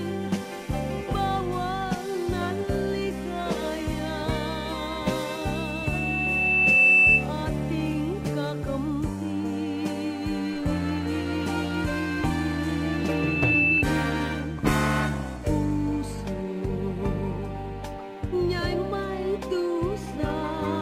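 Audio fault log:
5.26–7.28 s and 12.92–13.84 s, loudspeaker feedback squeal: the microphone picked up its own loudspeaker, and loop gain passed unity at 2.6 kHz, so that tone fed on itself, swelling over roughly a second and a half, then under a second, to about 10 dB and 5 dB above the sound.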